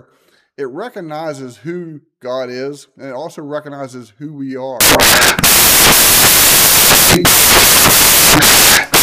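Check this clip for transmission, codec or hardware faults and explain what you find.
One fault is present: samples built from the wrong bytes, running from 4.81 s to the end of the clip. The reader misassembles each sample's bytes, so rapidly changing low-order bits become the dominant part of every value. The result is loud, harsh broadband noise. On a spectrogram this looks like flat, full-band energy, and the waveform becomes a dense block.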